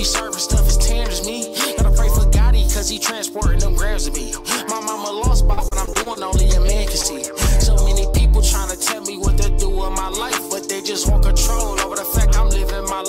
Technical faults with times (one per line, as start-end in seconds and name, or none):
5.53-6.17 repeated packet loss (robotic sound)
7.01-7.05 short concealed packet loss